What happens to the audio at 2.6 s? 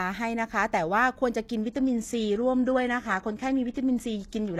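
At 2.6 s the speech is inside a stretch of adaptive stream at a lower bitrate, running from 1.62 s to the end. The player switched abruptly, without a gap, to a leaner encoding, consistent with a move from AAC at 96 kbit/s to HE-AAC at 16 kbit/s. Content above 12.3 kHz disappears and codec artefacts rise.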